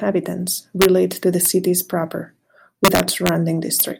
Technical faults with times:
0.82-0.85 integer overflow
1.45 integer overflow
2.85-3.29 integer overflow
3.80 integer overflow

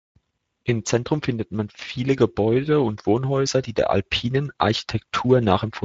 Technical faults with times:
0.00-5.84 Speex codec

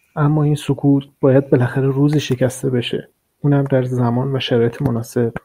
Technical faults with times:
none

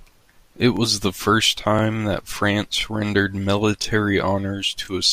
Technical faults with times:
0.77-0.79 overlapping chunks
1.79-1.81 overlapping chunks
2.81-2.83 overlapping chunks
3.83-3.85 overlapping chunks
4.85-4.87 overlapping chunks

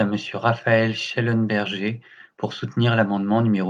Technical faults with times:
none

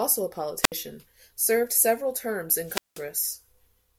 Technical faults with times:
0.61-0.72 wireless microphone squelch dropout
2.62-3.08 wireless microphone squelch dropout

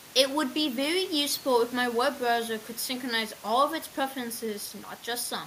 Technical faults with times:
none

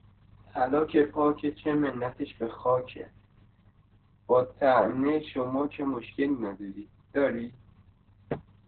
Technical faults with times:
0.00-8.68 Opus voice compression

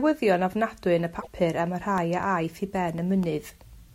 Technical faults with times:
1.16-1.27 damaged data in a compressed stream
1.98-3.73 periodic USB or driver dropouts

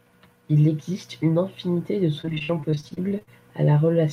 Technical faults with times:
2.21-3.29 repeated packet loss (robotic sound)

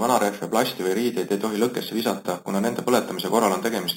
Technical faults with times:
0.00-3.97 imaging from sample-and-hold upsampling

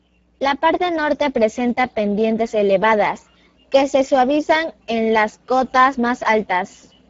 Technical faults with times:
0.00-7.09 Speex codec

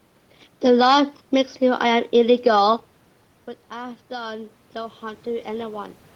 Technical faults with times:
3.68-6.02 automatic gain rising

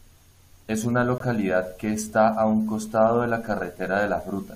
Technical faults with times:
1.18-1.21 corrupt frame muted

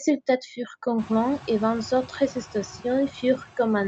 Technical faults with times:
0.00-3.88 noise suppressor artifacts

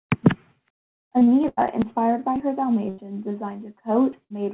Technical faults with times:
0.86-1.60 repeated packet loss (robotic sound)
2.89-3.01 burst of packet loss
4.24-4.33 burst of packet loss

